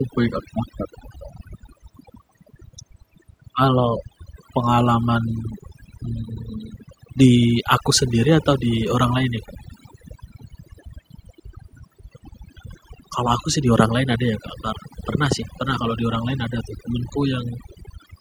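Throughout, the background sinks to near silence flecked with twinkling specks: overdone noise removal, suppressing quiet speech along with noise.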